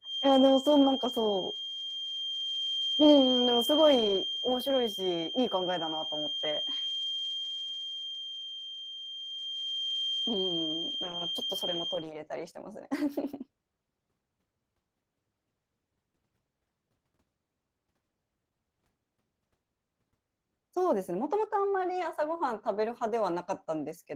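From the start to 12.07 s a feedback whistle sits behind the speech: a thin, steady tone at about 3.2 kHz, roughly 5 dB below the speech level, wavering slightly in strength. It is likely caused by a loudspeaker-to-microphone loop held just at the edge of feedback, so that one frequency keeps ringing without building up. It stops at 12.07 s.

Throughout the clip, Opus voice compression damage is plainly audible. The speech has a hoarse, slightly robotic grain, because the low-frequency part is coded by linear prediction with a coarse excitation signal. The upper band above 8 kHz is still present, which fits a hybrid mode with a transform layer on top. The overall coarseness points to a bitrate of around 16 kbps.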